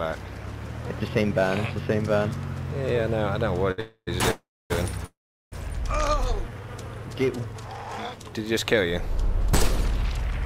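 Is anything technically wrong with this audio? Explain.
Yes. There is a stall, freezes and a slow-down, all in the middle of the clip.

At 3.71 s there is a short stall from a late packet. A packet arrived late, so the last sound is held for about 65 ms and then the audio carries on.

Call audio freezes follow at 3.80 to 4.09 s, 4.31 to 4.72 s and 5.06 to 5.54 s. The last sound fades out and silence follows. The silences last 70 ms, 270 ms and 380 ms. Delayed packets likely emptied the jitter buffer, and the audio resumes where it stopped.

From 6.36 to 6.67 s there is a jitter buffer slow-down. Repeated pitch periods add 43 ms, so this part plays at 88% speed and the pitch stays the same.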